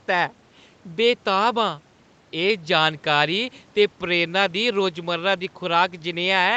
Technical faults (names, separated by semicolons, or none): none